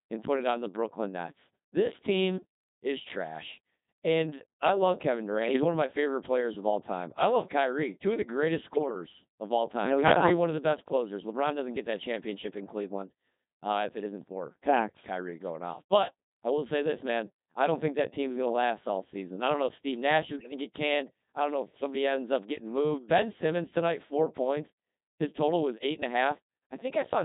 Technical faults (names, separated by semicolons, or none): Codec 2 vocoder; bit errors on digital voice radio